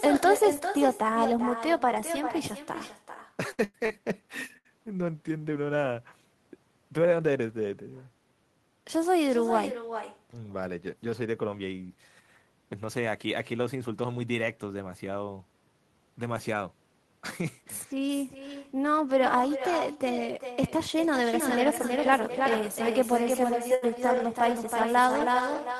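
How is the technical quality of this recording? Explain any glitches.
The recording has clear faults: an echo runs through the whole speech clip, with several packet-loss problems and a doubled track near the end. The call path's Opus coding is audible as coding noise and a high-frequency cut-off at 12 kHz, and its bitrate points to around 32 kbps.

Echo with no canceller, throughout. The far end plays the call over a loudspeaker, and its microphone feeds that sound back with nothing removing it. Each phrase returns around 0.4 s later at about 9 dB below the original. That shadow is thinner than the direct speech, so every sentence trails a faint, smeared repeat that blurs word edges.

Repeated packet loss (robotic sound), from 3.51 to 4.67 s. Over this stretch four separate holes open in the stream, the longest about 99 ms, and together they account for about a quarter of the span. Each hole is patched by stretching the previous sound until the next packet arrives, and about 280 ms of real audio never comes back. 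The result is a choppy, robotic stutter where syllables are clipped and replaced by buzzy, synthetic-sounding fill.

Doubled audio track, from 21.33 s to the end. A second full-band copy of the audio joins the mix about 0.3 s behind the first and only a few dB quieter. Unlike the echo, it has no room colour or decay, and it switches on abruptly. The cause is likely a second capture of the same signal through a slower path being mixed back in. It makes the closing seconds sound like two identical talkers speaking slightly out of step.

Burst of packet loss, from 23.74 to 23.84 s. Several consecutive packets went missing, about 80 ms in all. The receiver filled the gap by continuing the last sound and letting it fade, so a short held buzz or fading hiss sits where the audio should be. When the stream resumes, the material from inside the gap has been skipped, leaving a small jump in the speech.

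Lost packet rebuilt from error correction, a cluster of 18 short events between 23.68 and 25.57 s. Each lost packet, mostly 20 ms long, was replaced by the low-bitrate backup copy carried in the following packet, so there are no silent holes. Those rebuilt frames are coded more coarsely. Across this final stretch they add a rough, grainy, slightly noisier texture in quick flickers, layered on top of the doubled track.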